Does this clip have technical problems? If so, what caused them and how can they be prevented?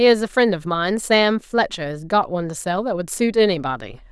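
No, this clip has no technical problems, so there is nothing to trace back or prevent.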